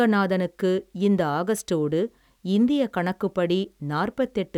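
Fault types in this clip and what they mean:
Nothing in this speech recording stands out as a technical fault, so there's no fault type to explain here.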